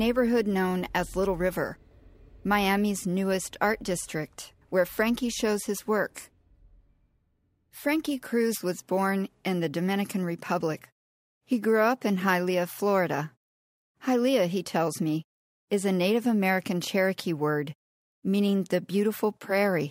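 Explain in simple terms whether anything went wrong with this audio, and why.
Somewhere along the way, the audio's sample rate was raised by a ratio of 3 to 2, and it was done by crude rate conversion: samples were simply repeated to fill the gaps, with no smoothing filter. The pattern fits a step from 32 kHz up to 48 kHz. The repeating error adds faint tones unrelated to the speech, so a gritty, fizzy buzz clings to louder and brighter sounds from start to finish.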